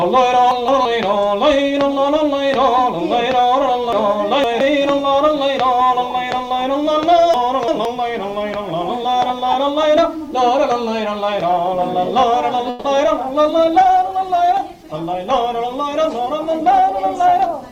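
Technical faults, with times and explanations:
0.51–0.85 s, 3.93–4.61 s, 7.34–7.85 s: chunks out of order. Blocks of about 171 ms play one, three and two chunks late, causing jumbled moments at the hard joins.
12.69–12.86 s: call audio freeze. The last sound is stretched into a fading buzz for 150 ms before normal audio resumes, likely from held-up packets draining the jitter buffer.
13.06–13.09 s: short concealed packet loss. About 20 ms of audio is lost, and the continued last sound fills about 10 ms of it as a brief smear or wobble before blending back.
13.23 s to the end: call bitrate drop. The sound turns rough and muffled with its high frequencies cut, consistent with the encoder falling from around 128 kbps to about 19 kbps.
15.23–17.70 s: jitter buffer speed-up. Short pitch-period pieces are repeatedly removed, so the audio runs about 6% fast at unchanged pitch and sounds hurried, losing roughly a seventh of a second.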